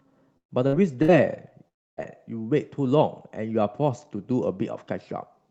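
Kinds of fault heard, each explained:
Burst of packet loss: Three short gaps, at 0.37 to 0.52 s, 0.67 to 0.75 s and 1.02 to 1.11 s, where the last sound is stretched into a fading buzz or hiss before the audio jumps ahead. The first gap loses about 120 ms and sinks to near silence; the others lose about 60 ms each. Several consecutive packets were lost or arrived too late, and the receiver extended the previous sound to cover the hole.
Long network dropout: From 1.68 to 2.0 s the sound is carried on as a fading tail that soon falls to near silence, and about 300 ms of audio is skipped when it resumes. This is likely a stretch where no packets reached the receiver at all. Its concealment could only extend the last sound briefly before running out, so most of the gap is silent, and playback picks up further along.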